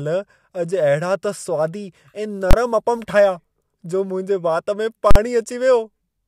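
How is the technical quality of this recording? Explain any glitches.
The recording has two hard bangs in the speech, both from invalid numbers at full scale. At 2.51 to 2.53 s and again at 5.11 to 5.16 s, the sound jumps to a loud, harsh burst, about 23 ms and then 46 ms long. A calculation produced infinite or invalid values that were forced to maximum output across a whole processing block, fitting blocks of 1024 and 2048 samples.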